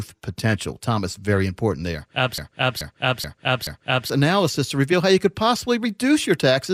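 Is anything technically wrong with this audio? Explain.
Yes. A broken-record loop runs from 2.38 to 4.10 s: a 0.43 s fragment of speech plays four times back to back. The stream likely stalled and kept resending its last buffered piece, so the speech that belonged there is lost.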